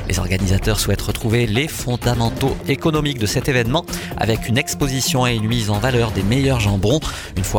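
No technical faults can be heard.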